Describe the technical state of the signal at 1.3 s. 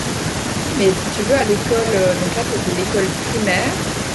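At 1.3 s the speech signal is intact, with no audible dropout, distortion or other fault at that moment.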